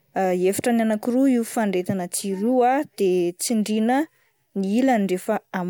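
Speech, with nothing technically wrong with it.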